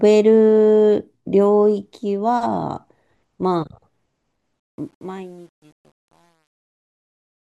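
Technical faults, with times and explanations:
4.60–7.46 s, truncation distortion on a fade: as the speech fades out toward the end of the clip, the tail turns grainy and rough, and from about 5.21 s onward the distortion is at its worst. The gain stage drops the level without dither and keeps too few bits, consistent with roughly 9-bit resolution, so the shrinking waveform collapses onto a few coarse square steps.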